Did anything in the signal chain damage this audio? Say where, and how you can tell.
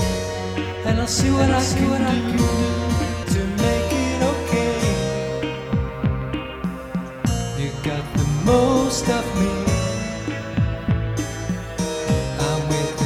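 Yes. From 1.17 to 3.23 s a second full-band copy, about 5 dB quieter, trails the sound by roughly half a second. It is dry and starts and stops abruptly. This doubled audio track likely comes from a slower second capture path at the driver or buffer stage.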